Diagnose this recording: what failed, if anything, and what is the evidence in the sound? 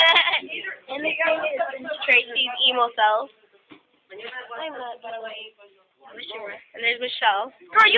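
Call processing stage: a noise suppressor applied to music or sounds treats steady content as noise, swinging level by roughly 5 dB; the waveform envelope pumps, and held tones flutter on the spectrogram.

Sound cut by the noise suppressor at 0.76–0.91 s, 3.27–4.11 s and 5.51–5.84 s, dipping about 12, 12 and 10 dB; the waveform narrows and sustained bands darken there.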